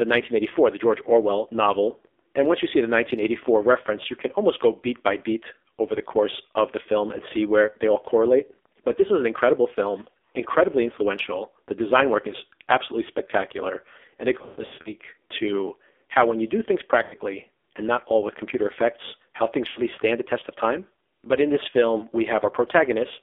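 AMR narrowband mobile codec damage runs through the whole clip: the speech is squeezed into a 300 Hz to 3.6 kHz band, and heavy low-rate coding, which fits a mode around 5.9 kbps, leaves the voice buzzy and synthetic, its pulse-driven vocal-tract model straining to follow.

Lost AMR speech frames hit at 14.38–14.93 s, where 320 ms of gaps are scattered over 480 ms with runs up to 120 ms. Shorter losses follow at 17.04 s and 19.68 s (80 ms each) and 21.98 s (40 ms). The decoder repeats the last good settings at falling gain, so the sound smears, warbles and fades, then returns rough.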